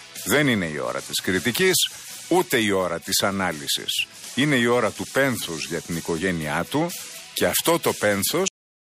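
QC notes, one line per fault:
8.48 s, cut-off end: the sound is chopped off mid-event at 8.48 s and falls straight to digital silence for the final 0.36 s, with no decay or fade. The last stretch of audio was never written out or played, so the waveform halts wherever it happened to be rather than ending naturally. Any tail or release the sound would have had is missing entirely, which is why the ending feels abrupt and truncated.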